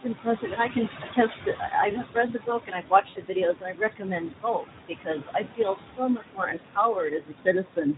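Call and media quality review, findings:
Call and media quality review, findings:

Noise suppressor artifacts, whole clip. Background pulled down by about 20 dB between phrases, then rising back under speech. Room noise sits about 8 dB below the speech and pumps with it. Probable component: noise suppressor, gating bands frame by frame.

Speex codec damage, whole clip. Plainly audible. Speech hoarse and noisy. Probable component: Speex encoder at a low-to-middle setting, which fits a rate of around 11 kbps. Too few bits for the excitation, so the fine structure of the speech is replaced by shaped noise.

Speech cut by the noise suppressor, 0.00–1.74 s and 1.91–7.97 s. Soft consonants, word endings and quieter stretches are swallowed or faint. Drops reach about 17 dB in the first span and about 22 dB in the second. Roughly a second is affected in the first span, several seconds in the second. 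Probable component: noise suppressor treating low-level speech as noise.

VoIP packet loss concealed by the speech codec, 3.09–3.22 s. A 60 ms gap is bridged by a stretched, fading sound, which fits three 20 ms frames lost. Speech stays weak and smeared briefly after the gap. Probable component: Speex decoder extrapolating its last pitch and filter with decaying gain.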